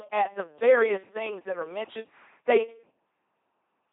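Throughout, an LPC-10 vocoder, fitting 2.4 kbit/s, rebuilds the speech from buzz or noise, leaving a heavily mechanical, robotic voice with nothing above 3.8 kHz.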